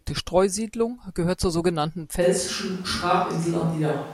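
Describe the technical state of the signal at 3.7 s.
At 3.7 s the signal is within a switch to a distant microphone, running from 2.23 s, just after "gehört zur sogenannten", to the end of the clip. The speech turns roomy and hollow with thinner bass, likely because the close microphone dropped out and a farther one took over. The overall level stays about the same, but room noise sits roughly 25 dB below the speech. A spectrogram shows weaker low frequencies, smeared decay tails and a raised floor between syllables. The waveform has softer envelope edges.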